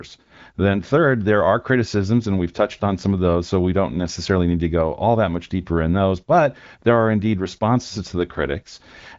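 No faults found; the speech carries nothing above about 7.6 kHz, which fits an AMR wideband (HD Voice) path running at a fairly high rate, around 16 kbit/s.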